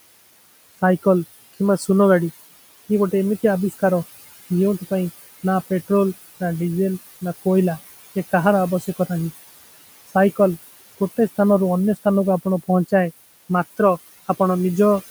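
From start to finish you can hear noise suppressor artifacts: the background noise, sitting about 16 dB under the speech, gets pulled down by about 16 dB in the gaps and swells back whenever someone talks.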